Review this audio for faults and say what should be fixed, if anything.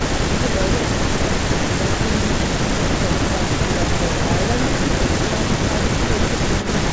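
Between 6.40 and 6.68 s, a delayed copy of the speech comes back. It trails by 382 ms and sits about 10 dB lower. This echo leak is likely from a far-end loudspeaker whose echo canceller passed part of its microphone pickup. A headset there prevents it.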